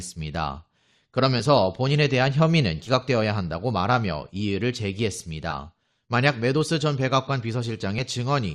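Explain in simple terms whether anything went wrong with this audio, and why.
Two short jumps in the speech come from compressed frames skipped. At 1.39 s and again from 2.86 to 2.91 s, the audio leaps forward, losing roughly 20 ms and then about 30 ms. That points to two and then three 10 ms frames that were missing or rejected as damaged by the decoder.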